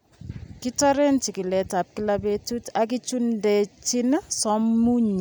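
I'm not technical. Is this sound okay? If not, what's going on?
Yes, no technical faults are audible anywhere in this speech recording.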